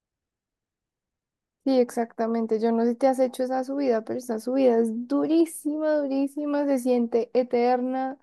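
No technical faults can be heard anywhere in this speech recording. Nothing in it calls for a timestamp or a closer look at how the audio was captured or delivered.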